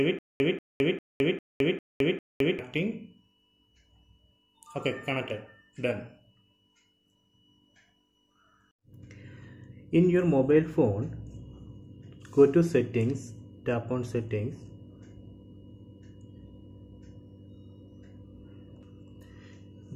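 From the very start until 2.59 s, the audio is caught in a stutter with silent gaps: a 187 ms burst replays six times, each followed by about 214 ms of digital silence, giving an even 400 ms cycle. This most likely comes from a stalled player retrying its last buffered fragment. On a waveform, identical blocks alternate with flat silent stretches. A spectrogram shows the same pattern repeating, separated by fully blank columns, and the audio meant for that span is missing.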